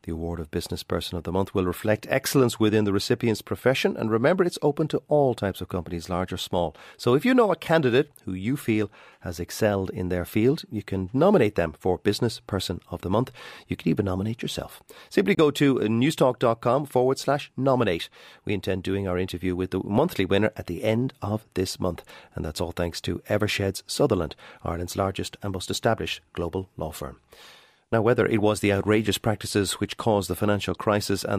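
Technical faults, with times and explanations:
15.35 to 15.39 s, Bluetooth dropout: the speech cuts to silence for roughly 23 ms, then picks up mid-flow as though it had kept playing during the gap, so a sliver of the sound is simply missing rather than delayed. This is likely a wireless link failing to deliver audio to the headphones in time, and a hole this short points to a single lost frame of encoded audio that the receiver dropped instead of playing.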